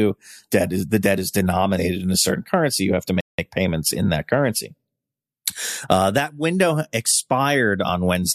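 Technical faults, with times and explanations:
3.21 to 3.39 s, rebuffering stall: the player used up its downloaded audio before the next portion arrived, so playback halted and waited for the buffer to refill. In the speech this is a sudden drop to total silence lasting about 179 ms, followed by a clean restart at exactly the point where the sound broke off. No speech is skipped or repeated; the gap simply adds that pause to the running time.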